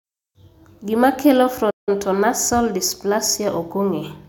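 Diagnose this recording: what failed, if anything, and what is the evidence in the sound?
The failure is at the playback stage: a playback stall. The speech cuts out mid-flow at 1.70 s and the output stays silent until 1.89 s, a gap of about 168 ms, before the audio carries on. The drop to silence is abrupt rather than a fade. The likely cause is that the player's buffer ran dry or its output thread was blocked, so no samples reached the device until it recovered.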